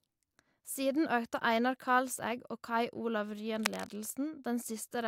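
Cable scratch noise runs from 3.54 to 3.92 s, a burst of dense, irregular crackle and rustle laid over the speech for under half a second and sitting only around 5 dB below it, so it is hard to miss. The likely cause is a worn cable, connector or control being moved. As the contact shifts, its resistance jumps about rapidly, and those jumps reach the signal as this uneven, scratchy noise.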